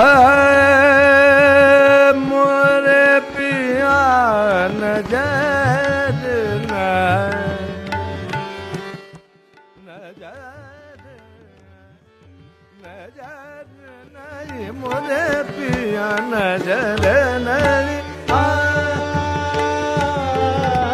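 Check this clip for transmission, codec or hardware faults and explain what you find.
There's one fault to flag: zipper noise from 13.96 to 15.08 s. During that stretch the level changes by roughly 25 dB, but instead of gliding it jumps in 3 dB stairs, around seven a second, with no smoothing between them. Each jump puts a tiny discontinuity in the waveform, so you hear a quick ticking, zipping texture riding on the sound while the level moves.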